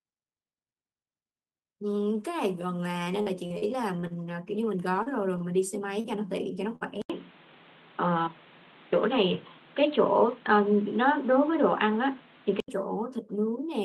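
Repeated packet loss (robotic sound) runs from 3.03 to 4.14 s. Six separate gaps, none longer than 38 ms, were patched by extending the preceding sound, about 200 ms of fill in all, with 120 ms of speech lost. The stretch turns choppy, with pieces missing.

Short concealed packet loss hits at 5.02 to 5.09 s and again at 6.00 to 6.07 s. Each time about 40 ms never arrived, and roughly 35 ms of synthesized continuation covered the hole before blending back. Each is a brief smear or wobble in the speech.

A short stall from a late packet occurs at 5.38 to 5.43 s. The jitter buffer ran dry, so the receiver held the last sound for about 23 ms until the packet turned up, then carried on. Nothing is lost, but that moment drags slightly.

A burst of packet loss follows at 6.76 to 6.84 s. About 40 ms went missing and was bridged by 50 ms of fading continuation, heard as a short held buzz or fading hiss before the speech jumps ahead.

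At 7.02 s the input switched to a poorer device, most likely a change of microphone or headset profile. The switch brings an 80 ms silence. Until 12.68 s nothing is present above 4.2 kHz, well short of the 12 kHz the Opus path carries, so the sound goes dull and boxy. The level also shifts by around 5 dB, and new background noise sits roughly 30 dB below the speech.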